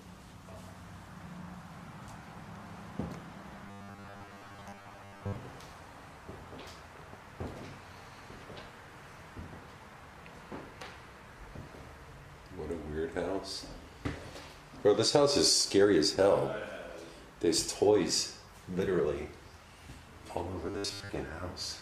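Robotic sound from repeated short buffers hits 3.68–5.36 s and 20.67–21.09 s: a fixed 100 Hz buzz, not gaps, likely from looping 10 ms chunks.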